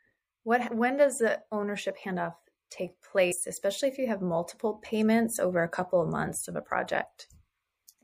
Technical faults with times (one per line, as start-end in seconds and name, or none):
0.00-8.03 MP3 compression
3.31 compressed frames skipped